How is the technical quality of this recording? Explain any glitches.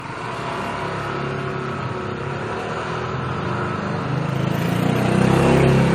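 The quality is degraded. Generation loss runs through the whole recording: the sound is swirly and hollow, and transients blur. It is likely the result of about three rounds of lossy encoding, consistent with 64 kbit/s AAC-LC. Each pass requantises on a shifted frame grid, so noise and gaps accumulate. A spectrogram would show a cutoff near 19.3 kHz. On the waveform, attacks look smeared.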